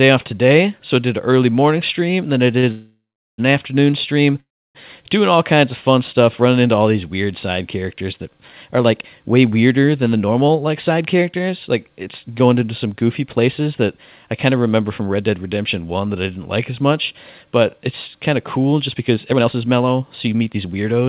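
Speech carried over a narrowband call path, with nothing above 4 kHz, which fits G.711 mu-law at 64 kbps, has three timing faults. After "stream and then i", a short stall from a late packet at 2.58 to 2.65 s holds the last sound for about 47 ms as a brief buzzy smear. Nothing is lost, and the sound is not cut to silence. A call audio freeze follows from 2.71 to 3.40 s, before "an afternoon stream doing", and another runs from 4.40 to 4.77 s. The sound decays into silence, roughly 400 ms and 300 ms of it, and is most likely caused by delayed packets emptying the jitter buffer. These gaps are longer and fade out, unlike the stall. A jitter buffer speed-up runs at 108% from 9.99 to 15.31 s, trimming roughly 0.4 s, and at 120% from 18.87 to 21.07 s after "it's kind of cool", trimming about half a second. The speech sounds hurried, but the pitch does not rise, so it is not a resampling error.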